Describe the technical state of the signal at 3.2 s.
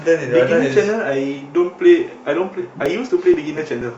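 At 3.2 s you're in periodic USB or driver dropouts (2.86–3.82 s): the driver stalls every 0.24 s, skipping roughly 10 ms, so the speech ticks regularly.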